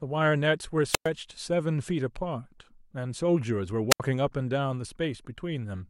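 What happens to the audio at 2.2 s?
Nothing goes wrong at 2.2 s; the speech runs through that moment intact, with no dropout, click or other fault.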